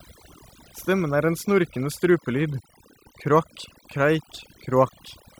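A speech clip with overdone noise removal throughout: aggressive suppression has gutted bands near the noise floor, leaving near-silent gaps with twinkling specks. A spectrogram shows blotchy, isolated time-frequency islands.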